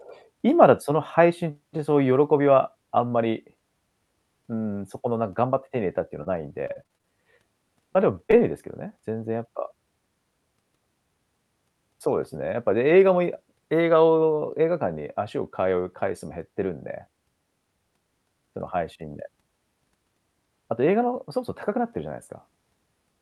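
At 6.23–6.28 s there is a short concealed packet loss: roughly 20 ms of speech failed to arrive in time, and the decoder bridged the gap by extending the preceding sound before crossfading back into the real signal. It comes across as a brief smear in the speech.

From 6.68 to 7.06 s, repeated packet loss (robotic sound) sets in. Seven separate gaps fall within this stretch, the longest about 24 ms, so roughly a third of the span is concealment rather than real signal. The patches arrive too close together to hide, and the speech turns choppy and robotic, with fragments dropped.

Further short concealed packet losses follow at 7.93–7.97 s and then twice back to back at 8.27–8.31 s and 8.31–8.34 s. Each covers about 20 ms of missing audio. The paired pair near 8.3 s yields a slightly longer wobble as two synthetic fills run together, and any short consonant landing in those holes may be lost.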